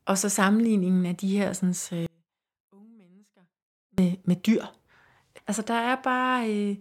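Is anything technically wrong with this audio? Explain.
Yes. From 2.06 to 3.98 s the speech cuts out abruptly for about 1.9 s, leaving only a faint trace roughly 35 dB down. This is an audio dropout to a faint residue, likely from the wanted signal being lost while the downstream path stayed live.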